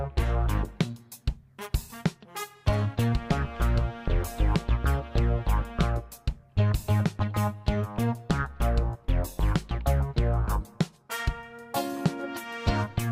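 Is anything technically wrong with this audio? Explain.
No, nothing technically wrong can be heard here.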